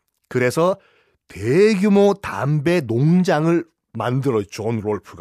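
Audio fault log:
Nothing stood out on listening to the speech.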